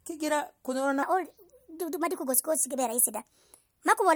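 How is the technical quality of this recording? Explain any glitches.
The recording has one clear glitch: a section at the wrong speed. From 1.03 s to the end, the speech runs 1.31 times too fast, likely because it was played against the wrong clock. Speed and pitch rise together, by roughly five semitones, so it sounds high and hurried. On a spectrogram, harmonics and formants jump upward at 1.03 s; in the waveform, cycles and syllables are visibly compressed.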